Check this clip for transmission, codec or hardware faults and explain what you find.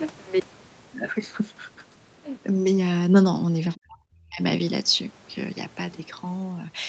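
Two faults are audible in this speech clip.

From 0.00 to 2.49 s the speech sounds hollow and phasey. This is channel delay (comb filtering). One channel arrives a few samples late, roughly a tenth of a millisecond, and summing to mono cancels evenly spaced frequencies, the first notch falling near 5 kHz.

From 3.70 to 4.41 s the speech drops sharply, by about 40 dB at its deepest, for around 0.7 s before recovering. The likely cause is speech suppressed in double talk. The echo canceller turned this talker down while the far side was also speaking. The call microphone processing limits the band to 8 kHz.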